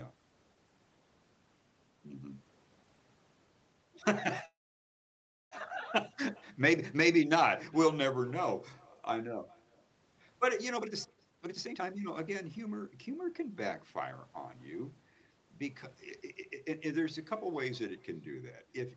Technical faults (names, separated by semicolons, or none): echo with no canceller; call audio freeze; jitter buffer speed-up